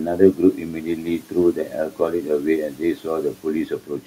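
From 0.0 to 4.07 s there is speech cut by the noise suppressor, for roughly three seconds in total: quiet consonants and word endings dip by up to about 13 dB and sound swallowed. Unlike a dropout, the sound never vanishes completely, and the faint room noise, about 25 dB below the speech, ducks along with it.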